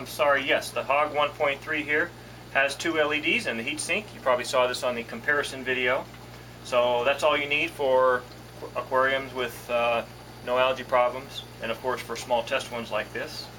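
No technical faults can be heard anywhere in the clip.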